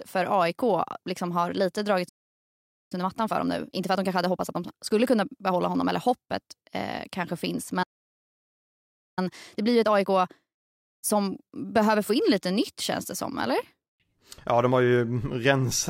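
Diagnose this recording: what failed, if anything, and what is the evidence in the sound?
At the playback stage the player was likely starved of data or had its output thread blocked, so output went silent. The speech stops mid-flow at 2.08 s for about 0.82 s, and again at 7.83 s for about 1.34 s, before resuming.

After each playback stall the player worked off its backlog with time-compressed catch-up, cutting out short slices and cross-fading the joins. From 2.92 to 5.92 s the speech runs 1.25 times fast, and from 9.19 to 12.19 s 1.15 times fast, hurried but unchanged in pitch.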